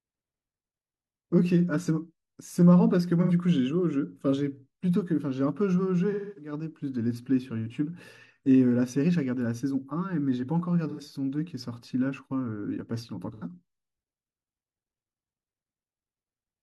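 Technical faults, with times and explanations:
3.22–3.32, 10.89–11.01 and 13.33–13.44 s: AAC frame loss with concealment. About 85 ms of sound drops out each time, which fits two lost frames. The decoder fills the gap by reusing the last good spectrum with scrambled phase. So each gap comes out as a brief smeared, noisy, phasey patch.
6.11–6.52 s: AAC frame loss with concealment. A longer gap, which fits about six lost frames. The reused spectrum decays toward silence, then the sound fades back in.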